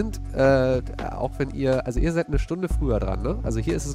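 From 0.45 s to 3.53 s there is a regular click, recurring about every 0.61 s, roughly seven in all. This pattern is characteristic of clock drift buffer slips. The likely cause is two devices running on independent clocks that disagree by a few hundred parts per million. The buffer between them gradually fills or drains until a small block of a few samples is dropped or repeated. Each of those discontinuities produces a short, sharp tick in the signal.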